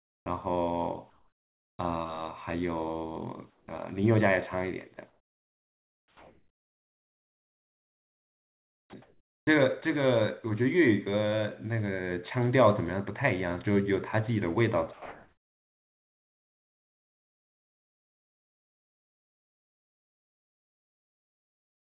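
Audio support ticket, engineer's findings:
Comfort noise in place of the background, likely from sender DTX: real room tone swapped for steady, featureless synthetic noise at 0.00–0.26 s (about 38 dB quieter), 1.10–1.79 s (about 14 dB), 3.50–3.68 s (about 7 dB) and 14.93 s to the end (about 1 dB).

Onset clipped by the voice detector, VAD likely slow to reopen: first moments of speech not sent and replaced by fill, so words start abruptly at 0.24 s, 1.75–1.79 s (40 ms) and 3.66 s.

Sound chopped by the voice detector, VAD likely toggling transmit repeatedly over 5.09–9.47 s: quiet syllables and word edges dropped into comfort noise, speech choppy. Narrowband G.711 path audible, nothing above 4 kHz.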